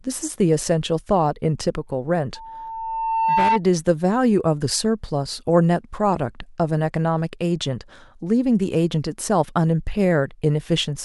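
From 2.35 to 3.61 s, a loudspeaker feedback squeal rises at about 898 Hz. The microphone is hearing its own loudspeaker, and the loop gain at that frequency passes one. The tone swells over roughly a second until it stands somewhat above the speech.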